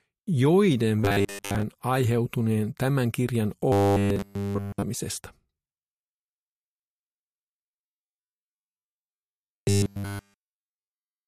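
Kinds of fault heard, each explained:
Robotic sound from repeated short buffers: a rigid, metallic buzz fixed at 100 Hz covers 1.05 to 1.63 s, 3.72 to 4.82 s, and 7.84 s to the end. This fits a 10 ms slice being looped, likely because fresh audio arrived too late. Most of the first stretch is replaced and all of the later ones. Unlike a dropout, nothing goes silent. The buzz holds one pitch while loosely following the sound's outline.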